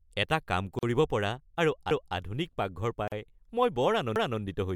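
Gap at a join of encoded pieces, 0.79 to 0.83 s and again 3.08 to 3.12 s: the speech breaks for a gap of about 40 ms, first right after "এটা কাম" before "কৰিব পৰা আৰু আধুনিক", then after "পৰা আৰু আধুনিক পাকঘৰ". Each two-second piece was encoded on its own and joined without trimming, so encoder start-up delay and last-frame padding survive as silence. The edges are smeared by the codec, and the speech resumes where it left off.

Overlapping chunks, 4.16 to 4.41 s: a 250 ms stretch of speech plays twice, heard as a stutter. The audio was handled in two-second chunks, and this chunk began a quarter-second before the previous one ended, so the overlapping section was repeated rather than discarded.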